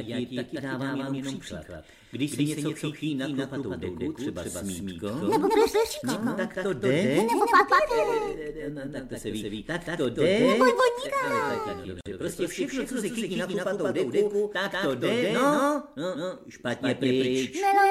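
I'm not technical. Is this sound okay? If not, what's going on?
No. Something in the chain is likely capturing or mixing the same audio twice, out of step. The result is a doubled audio track: a second, equally loud copy trails about a fifth of a second behind, throughout the clip, so everything sounds echoed and smeared.

There's also a gap at a join of encoded pieces. The recording was saved in separate sections and stuck back together without trimming the padding each section carries. At 12.01 to 12.06 s, the sound drops out for about 48 milliseconds, then continues where it stopped.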